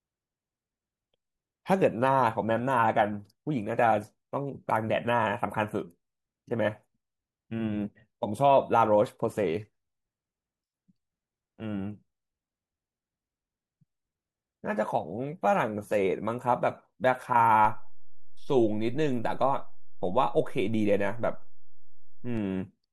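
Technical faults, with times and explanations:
17.65 to 22.37 s, DC step: the waveform's zero line jumps by about -30 dBFS at 17.65 s, holds there, and steps back at 22.37 s. Each sudden shift gives a low thump, while the speech rides on unchanged above the displaced baseline.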